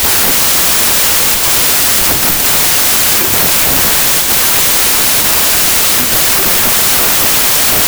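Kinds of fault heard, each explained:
Wrong sample width: packed 24-bit audio is being read as 16-bit, so most sample values combine mismatched bytes. The speech is buried under loud, harsh noise. It plays at about two-thirds speed, sounding slow and lowered in pitch throughout.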